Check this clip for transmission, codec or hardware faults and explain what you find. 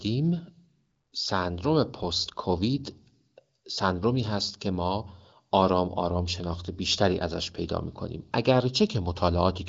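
No transmission, codec or hardware faults are audible in this speech: it carries the band-limited sound of AMR wideband (HD Voice) coding at a comfortable rate consistent with 18.25 kbit/s, with content stopping around 7.7 kHz and at most faint coding roughness.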